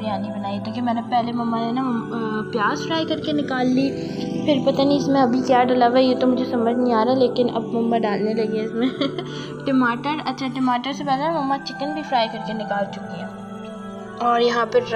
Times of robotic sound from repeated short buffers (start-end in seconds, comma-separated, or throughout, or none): none